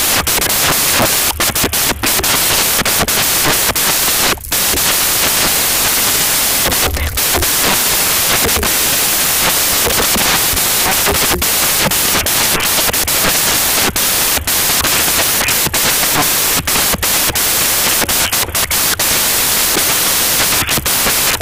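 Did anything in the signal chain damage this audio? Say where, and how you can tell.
Yes, samples built from the wrong bytes at sample-format conversion, throughout: misassembled low bits dominate, making loud white noise, flat on the spectrogram.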